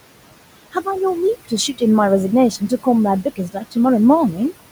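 Noise suppressor artifacts run through the whole speech clip: the suppressor pulls the room noise, which sits about 17 dB below the speech, down by about 18 dB between phrases, so the background pumps up and down with the voice. Speech cut by the noise suppressor occurs from 3.36 to 3.76 s, where the suppressor mistakes quiet speech for noise and lowers it by up to about 14 dB, leaving roughly a tenth of a second of that span faint and swallowed.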